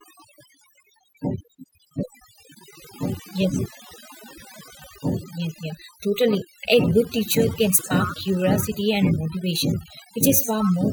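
Overdone noise removal runs through the whole recording: a noise reducer set too hard pulls individual frequency bands down or out wherever they sit near its noise estimate, taking the quieter parts of the voice with them. The background drops and breaks up into twinkling, warbling specks.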